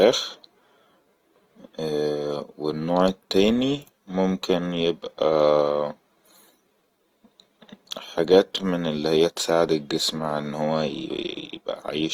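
Opus compression runs throughout the speech, from the first second to the last. The likely cause is Opus in its music-oriented CELT mode at a low rate, which fits a bitrate near 24 kbps. Band energies survive, but with too few bits the fine detail inside each band is rebuilt by folding lower bands or inserting noise. The full bandwidth stays open, yet the speech sounds plainly rough and grainy, with a noisy texture instead of MP3-style swirling.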